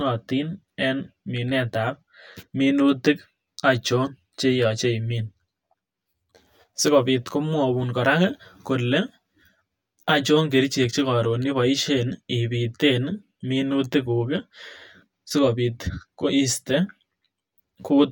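Throughout the speech, channel delay (comb filtering): one channel lags roughly 10 ms, notching the mono sum evenly from near 50 Hz. Sounds hollow; spectrogram shows dark horizontal stripes.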